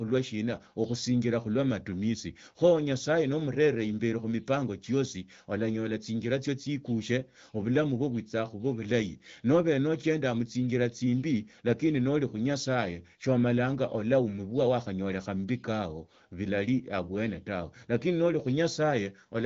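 No technical faults can be heard in this speech.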